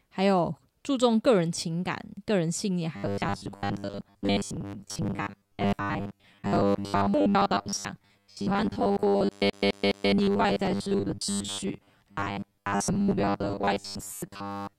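Speech, with robotic sound from repeated short buffers from 2.96 s to the end: a rigid 100 Hz buzz, likely from roughly 10 ms chunks replayed to cover missing audio, showing as even 100 Hz harmonic lines on a spectrogram. From 9.50 to 10.12 s a CD stuck on one turn loops a 208 ms slice three times, appearing as identical waveform blocks separated by brief dips.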